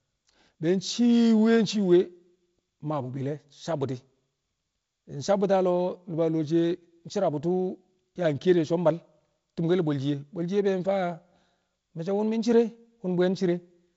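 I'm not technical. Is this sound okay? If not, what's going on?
Yes, nothing wrong here.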